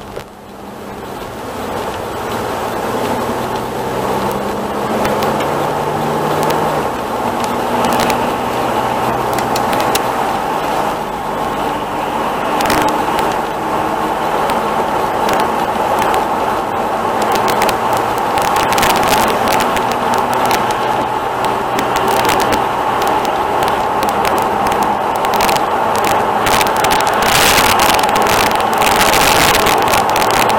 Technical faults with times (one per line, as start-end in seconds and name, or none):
0.00-30.58 integer overflow